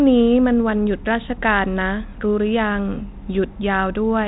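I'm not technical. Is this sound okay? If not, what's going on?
Yes, no faults here.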